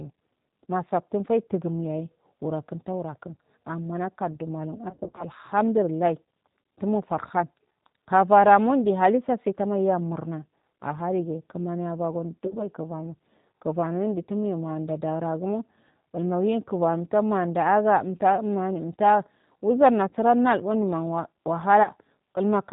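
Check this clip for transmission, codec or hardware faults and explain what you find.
Two faults here: the whole speech clip runs through a low-rate codec, and it has four short dropouts. Throughout, it sounds like the G.729 codec, which fits an 8 kbit/s VoIP link. Speech is rebuilt from a filter and a few pulses per frame, so it's band-limited, rough and a little synthetic. Around 4.90 to 5.24 s, 12.46 to 12.59 s, 20.09 to 20.13 s and 21.83 to 21.89 s, you hear VoIP packet loss concealed by the speech codec. The decoder stretches its last frame into a buzzy tone or a coloured noise that fades, and the first gap is the longest.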